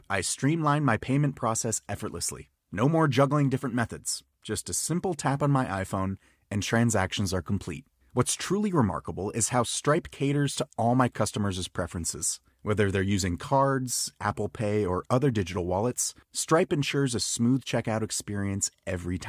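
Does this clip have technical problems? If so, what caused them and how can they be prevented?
No, no technical faults here.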